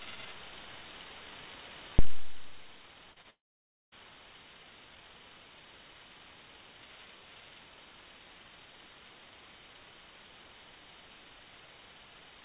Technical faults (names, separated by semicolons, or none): short concealed packet loss; long network dropout